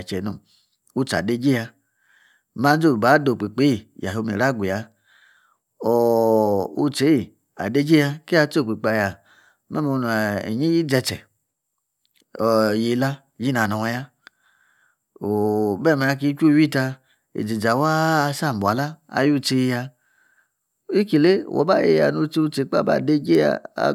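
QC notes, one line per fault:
No faults found on this pass of the speech.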